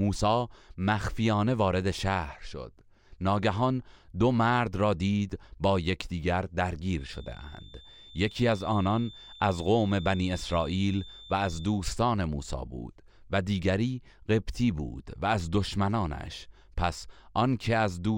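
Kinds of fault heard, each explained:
feedback whistle: a thin 3.6 kHz tone rings about 20 dB under the speech from 6.9 to 11.8 s, likely a loudspeaker-to-microphone loop held just short of feedback.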